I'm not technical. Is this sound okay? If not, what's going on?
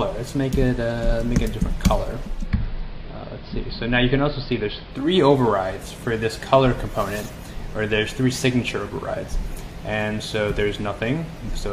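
No. From 2.24 to 5.21 s there's digital radio blending to analogue: the radio lost its digital signal and faded, over about a third of a second, to the AM broadcast. The sound goes dull, slightly quieter, with faint hiss, then returns.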